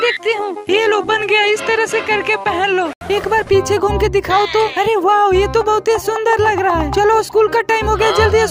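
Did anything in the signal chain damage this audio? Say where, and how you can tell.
Yes. From the start to 3.01 s the audio has a narrower band, a faint added noise floor roughly 40 dB down and no obvious level shift, then an 80 ms silence before full bandwidth returns. This is at the capture or driver stage, likely an input switched to a poorer device.

Between 0.40 and 1.22 s the level pulses by about 6 dB at around 100 Hz, heard as a rough, buzzy tremolo. This is overlap-add ripple from frame-based processing: windowed frames were recombined with an overlap that doesn't sum to constant gain, so every frame boundary modulates the level.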